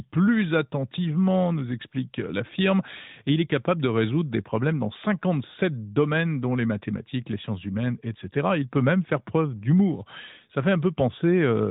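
No technical faults are audible in this recording.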